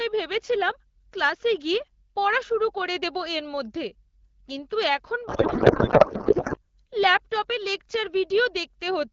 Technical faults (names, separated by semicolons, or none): codec payload misread